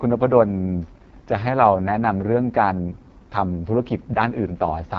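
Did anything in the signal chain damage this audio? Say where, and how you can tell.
Yes, at the codec stage, throughout: an AMR wideband (HD Voice) codec, heavily damaged. The speech sounds rough and raspy, pointing to the lowest 6.6 kbit/s rate. A spectrogram shows harmonics ending near 6.4 kHz, noise-like fill above, and nothing past 7.5 kHz.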